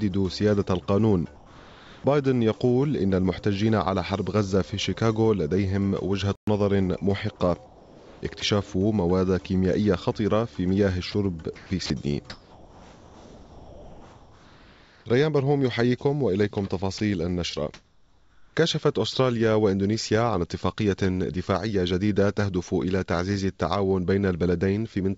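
Audio carried over a call link, band-limited with nothing above 8 kHz, which fits the G.722 codec. During pauses at 1.36–2.04 s, 7.66–8.42 s and 17.74–18.56 s the real background gives way to a flat, featureless hiss, about 3 dB quieter in the first stretch (background about 25 dB below the loud parts) and about 3 dB louder in the last (about 36 dB below). This is comfort noise in place of the background, likely from discontinuous transmission with the receiver synthesising noise while the sender stays quiet. At 6.35–6.47 s the sound cuts out for 120 ms and then resumes, a playback stall, likely the player running dry of buffered data. At 8.40 s and 16.98 s a 20 ms sliver of sound is swallowed into that same synthetic hiss. This is sound dropped by the voice detector, likely because the sender's detector took a faint passage for background. From 11.12 to 15.06 s the sound turns choppy, with two or more holes where it gives way to synthetic noise. 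This is sound chopped by the voice detector, likely from the detector toggling transmission on and off repeatedly.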